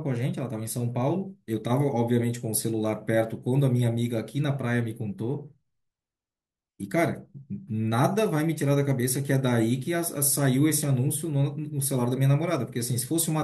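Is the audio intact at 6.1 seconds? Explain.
Yes, at 6.1 seconds the speech plays through cleanly, with no dropout, click, distortion or other fault at that moment.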